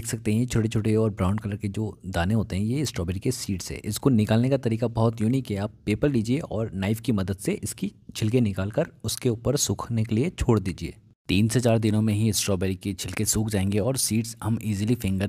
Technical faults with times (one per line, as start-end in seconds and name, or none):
none